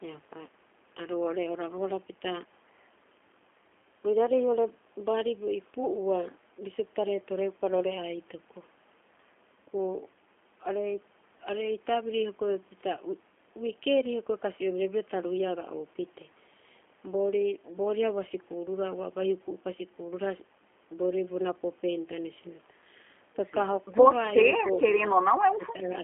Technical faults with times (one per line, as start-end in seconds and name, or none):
0.00-26.04 G.729 codec
25.23-26.04 speech suppressed in double talk